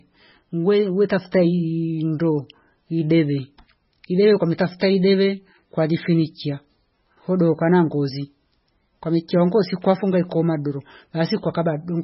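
Throughout the speech, heavy MP3 compression is audible: nothing above 5.5 kHz, watery swirling detail, smeared attacks. The bitrate sounds like roughly 16 kbps, likely starving the encoder.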